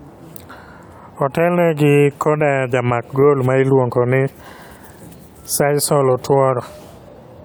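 No technical faults are audible.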